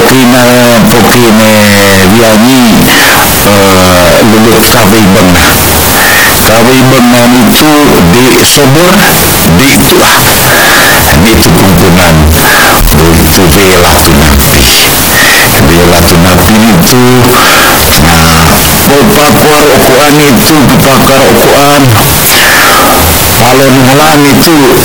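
Float read as integer runs throughout this speech clip. The waveform sits almost square at an almost fixed, high level, so everything is very loud and harsh, and the background noise comes through as strongly as the speech itself, though pitch movement is still traceable. The likely cause is 32-bit floating-point samples being interpreted as 32-bit integers, which makes each sample's sign and exponent bits dictate its level instead of the true amplitude.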